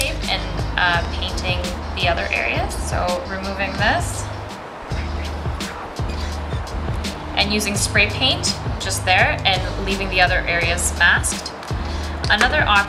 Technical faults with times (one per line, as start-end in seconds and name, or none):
1.05-1.07 loud pop
10.64-10.89 loud pop